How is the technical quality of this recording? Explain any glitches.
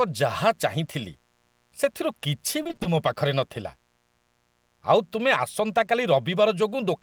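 The recording has two faults: a constant faint buzz and a brief burst of robotic chopping.

Mains buzz runs throughout. Switching spikes twice in every 60 Hz mains cycle add a raspy hum about 40 dB below the speech. On a spectrogram it appears as evenly spaced horizontal harmonic lines.

Repeated packet loss (robotic sound) occurs from 2.63 to 2.87 s. Roughly six short gaps, none longer than 20 ms, are patched by repeating earlier sound, so half of that stretch is filled in and it sounds choppy. The waveform shows repeated, copied-looking segments.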